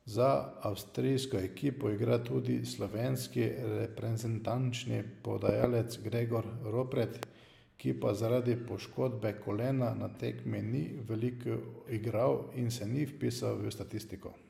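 Speech with loud pops: a double pop from 5.49 to 5.66 s and a single one at 7.23 to 7.25 s, just before "ki pa zaradi poškodbe", both well above the speech. Unlike dropouts, the speech carries on underneath. Each is likely a voltage pulse from a plug, switch, static or driver glitch.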